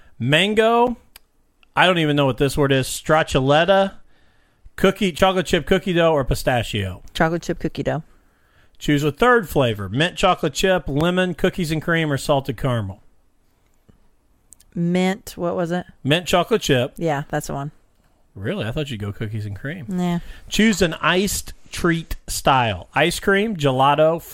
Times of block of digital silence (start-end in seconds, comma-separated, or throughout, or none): 0.87, 5.18, 11.01